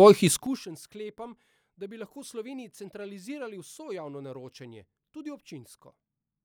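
From 0.28 to 0.65 s there is zipper noise. The level drops by roughly 25 dB in coarse 6 dB steps, about ten per second, with no smoothing. Each jump leaves a small click. The speech carries a ticking, zipping texture while it fades.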